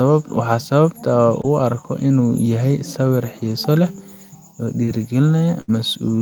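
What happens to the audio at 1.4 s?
Short concealed packet loss at 1.41 to 1.45 s: about 20 ms of speech arrived too late, so the receiver extended the preceding sound, leaving a brief smear.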